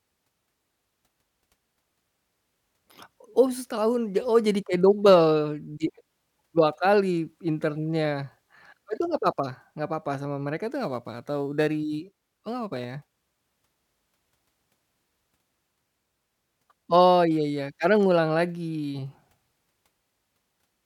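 Crude rate conversion from 10.72 to 13.14 s in this speech clip: samples dropped rather than filtered, consistent with 48 kHz to 44.1 kHz, leave a gritty inharmonic fizz roughly 30 dB down.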